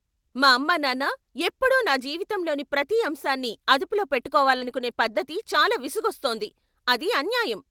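At 2.95 to 2.97 s, between "ఎప్పుడూ నా జీవితంలోని ప్రతి" and "అంశాన్ని అదుపులో", the speech turns briefly rough and noisy with no gap. This is a lost packet rebuilt from error correction. The decoder played the low-bitrate copy carried in the following packet, and the 20 ms span fits a single packet.

At 4.57 to 4.63 s, after "జీవితంలోని ప్రతి అంశాన్ని అదుపులో", there is a short smear or wobble. This is a short concealed packet loss: 40 ms of audio never arrived in time, and the decoder filled the hole by carrying the preceding sound forward before blending back into the real signal.

Overlapping it, from 4.61 to 4.71 s and just before "పద్ధతి చాలా", comes a longer rough, noisy stretch of 60 ms rebuilt from error-correction copies, which fits three separate packets.

The same brief roughness returns at 6.43 to 6.45 s, where another 20 ms is rebuilt from a redundant copy.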